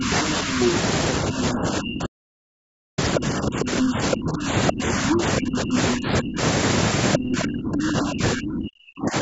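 A speech recording from a call, and it's fighting with its echo canceller the whole way through. The talker keeps getting ducked, dipping by roughly 25 dB at worst and with around five seconds affected in total, which is the classic speech suppressed in double talk pattern, likely from the canceller clamping down while both ends talk at once. The other side's voice leaking through shows up at 0.55 to 0.69 s and again at 3.15 to 4.72 s, sitting about as loud as the talker, plus a brief, slightly quieter scrap at 7.13 to 7.18 s. That points to likely residual loudspeaker echo the canceller didn't scrub from the mic. Then there's an audio dropout to silence from 2.06 to 2.98 s, about 0.91 s of dead silence with no room tone, so whatever happened there is just gone, likely a lost input or a broken link while the recorder kept writing. The call's mic processing is also audible in the band limit, with nothing above 8 kHz.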